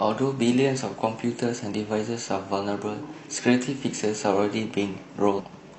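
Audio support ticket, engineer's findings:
Damaged data in a compressed stream, 5.34 to 5.40 s, near clip end. Brief chirp, squawk, click or short hole, about 60 ms. Component: compressed stream or file feeding the decoder. Mechanism: corrupted bytes in the frames there, so the decoder misreads or drops them, loses sync and hunts for the next frame header. Spectrogram: short vertical smear or gap, hard edges. Waveform: abrupt discontinuity, garbled burst or dropout unlike surrounding envelope.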